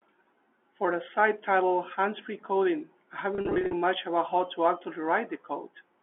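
This speech clip, carried over a G.711 telephone line limited to about 300 Hz to 3.4 kHz, has a stretch from 3.35 to 3.73 s, just before "much about", that sounds slightly held and briefly buzzy. That is packet loss with pitch repetition. About 240 ms went missing in scattered gaps across 380 ms, which fits many 10 ms packets. Each gap, at most 50 ms, was bridged by repeating the last pitch period.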